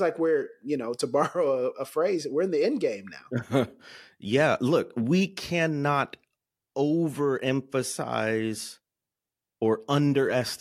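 No technical faults can be heard anywhere in this speech recording. Nothing in the audio interrupts, distorts or otherwise disturbs the sound at any point.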